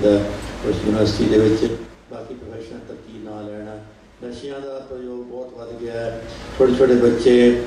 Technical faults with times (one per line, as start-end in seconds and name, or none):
1.58-2.04 zipper noise